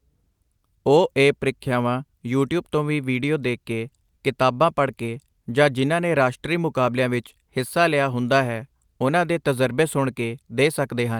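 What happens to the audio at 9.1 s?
Nothing goes wrong at 9.1 s; the speech continues intact through that moment with no dropout, click or other fault.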